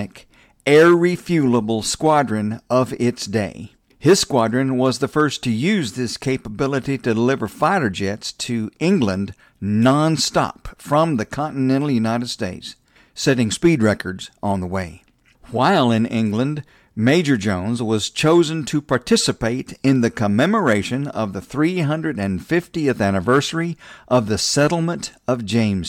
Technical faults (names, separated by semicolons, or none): none